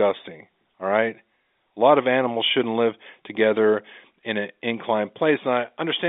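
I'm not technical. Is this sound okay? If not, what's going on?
Yes, this sound is okay; nothing is going wrong in it.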